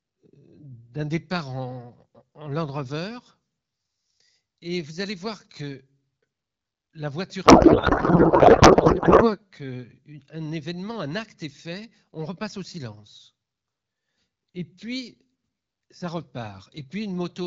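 Speech carried over AMR wideband, which sounds clear and fits the 12.65 kbit/s mode, turns to garbled warbling noise from 7.45 to 9.35 s. This is a codec payload misread: octet-aligned AMR frames read as bandwidth-efficient, so fields land in the wrong places. Unlike packet loss, it is continuous noise rather than gaps or smeared repeats.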